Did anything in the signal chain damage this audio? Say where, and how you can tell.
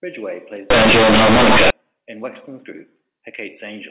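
Yes. The damage is at sample-format conversion, from 0.70 to 1.70 s: companded audio read as linear. The sound turns loud and buzzy, with heavy noise in pauses. Mu-law bytes were played as plain 8-bit samples, unexpanded. Each sign change swings half the range. Quiet sounds match loud ones.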